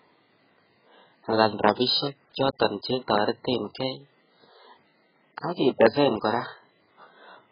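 Speech, with AAC compression damage throughout. Nothing is audible above about 5 kHz, so the sound is dull. Sibilants turn fizzy and smeared, and sustained sounds warble. The heavy damage likely comes from AAC-LC at a very low bitrate, around 8 kbps.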